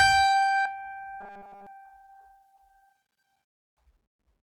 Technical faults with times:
0.65-0.67 skip ahead
0.75-2.52 jitter buffer speed-up
1.21-1.67 robotic sound from repeated short buffers

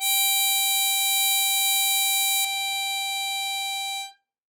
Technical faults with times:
0.00-2.45 pre-emphasis left on

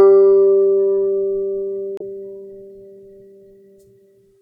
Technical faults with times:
1.97-2.02 damaged data in a compressed stream

